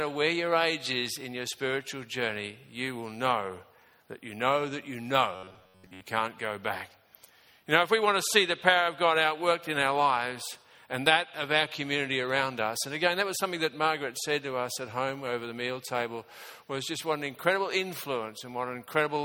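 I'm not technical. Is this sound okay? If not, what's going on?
No. From 5.36 to 6.03 s the sound turns into a stiff, metallic buzz near 94 Hz. That is robotic sound from repeated short buffers, likely caused by audio arriving too slowly, so roughly 11 ms snippets are looped in place of most of the real audio there.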